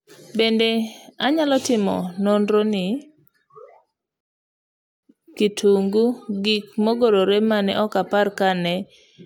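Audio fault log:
4.21–5.03 s, rebuffering stall: the speech drops to silence for about 0.83 s, then resumes exactly where it stopped, at "kitungu gik mogorre mane". The player ran out of downloaded audio and waited for more, so nothing is missing but 826 ms is added.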